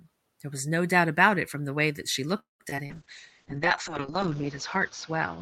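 Right after "the way that she", at 2.39 s, the sound stalls: a brief buzzy continuation of the last sound fades into silence lasting about 0.16 s, and the speech resumes at 2.62 s from exactly where it stopped. Nothing is lost, but a gap of about 0.2 s has been inserted. This is a call audio freeze, likely caused by packets held up in transit until the jitter buffer ran dry, leaving the receiver to stretch the last sound until the delayed audio arrived.

Almost immediately afterwards come three short concealed packet losses, at 2.70 to 2.74 s, 2.76 to 2.80 s and 2.86 to 2.92 s. Each one is a quick smear or wobble rather than a clean dropout. The first two each replace 20 ms of missing audio and the third replaces 40 ms. In each case the decoder patched the hole by extending the preceding sound and then blended back into the real signal.

From 2.89 s to the end there is a call bitrate drop. 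The speech turns rough and watery and loses its top end, because the encoder was pushed from 48 kbps down to 7 kbps. At that rate the audio bandwidth shrinks from 20 kHz to 8 kHz. The lowest rate persists for 1.35 s, and the coarser coding stays audible through to the close. Around 4 s the room noise becomes more noticeable, rising by about 12 dB while staying about 21 dB below the speech.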